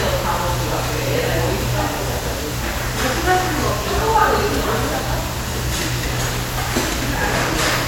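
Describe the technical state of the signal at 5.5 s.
At 5.5 s the sound has a dull top end, with two kinds of coding damage layered together. This runs through the whole clip. The likely cause is transcoding between lossy codecs: the character points to a WMA encode at around 96 kbit/s that was re-encoded to MP3 at a similar rate. The MP3 stage spent bits on the WMA artefacts and added its own, while the lower bandwidth limit carried through.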